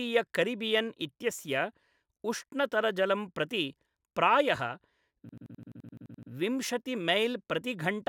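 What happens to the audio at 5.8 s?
A rapid machine-gun stutter at 11.7 Hz runs from 5.29 to 6.32 s: a system hang loop replaying one 85 ms chunk, consistent with a 4096-sample buffer.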